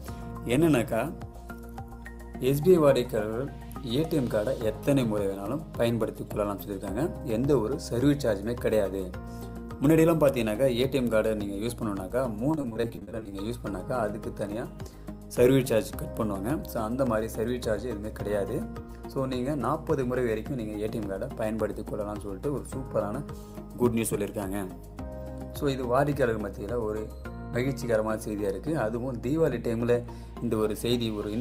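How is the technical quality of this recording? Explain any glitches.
One glitch stands out: repeated packet loss (robotic sound) from 12.51 to 13.33 s. Over that stretch, audio packets kept arriving late or not at all, and each hole was papered over by extending the last good sound. The dropouts are short, none longer than about 40 ms, but they come in quick succession, so roughly 300 ms is patched and about a third of the span is concealed. The result is choppy, with pieces missing.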